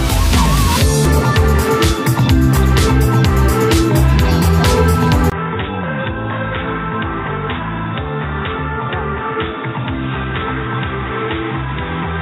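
At 1.05 s the audio does a skip ahead: roughly 400 ms of material was dropped while later audio was already queued, and the two sides are butted together with no fill. On a waveform the envelope changes abruptly at the splice; a spectrogram shows a hard vertical seam.

From 5.3 s to the end the sound turns dull and boxy after a 20 ms silence, likely because the input switched to a poorer device. Nothing survives above 3.7 kHz, the level falls by about 10 dB, and new background noise sits about 30 dB below the signal. A spectrogram shows a flat ceiling at 3.7 kHz, and the waveform shrinks after a brief flat gap.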